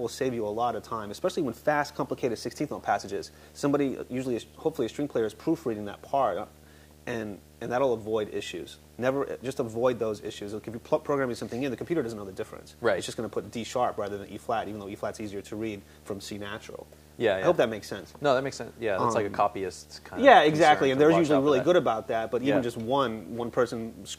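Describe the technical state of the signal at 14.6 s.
At 14.6 s the signal carries video or display buzz, and it runs through the whole clip rather than starting or stopping here. A screen or video cable is coupling into the audio path. The buzz repeats at 75 Hz, the picture's field rate. It sits roughly 25 dB below the wanted sound. Above the buzz there is a layer of harsh hash from the same interference.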